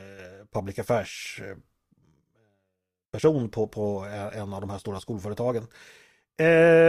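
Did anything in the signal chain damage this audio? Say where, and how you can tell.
No, nothing in this speech clip points to damage at any stage of the signal chain.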